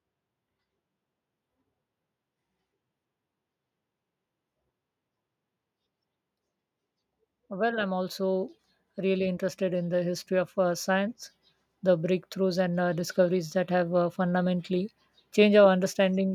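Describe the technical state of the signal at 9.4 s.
At 9.4 s the signal is partway through an automatic gain rise that runs from 7.47 to 10.98 s. The automatic gain control judged the input too quiet and began lifting its gain step by step, climbing by about 8 dB across those three and a half seconds. At this point the level is still ramping upward, so the speech and the background noise beneath it swell together, growing steadily louder instead of holding a stable level.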